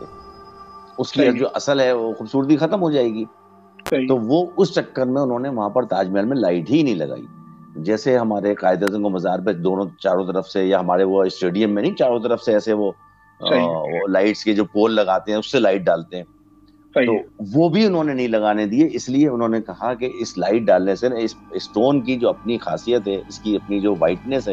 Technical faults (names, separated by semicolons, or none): electrical switching spike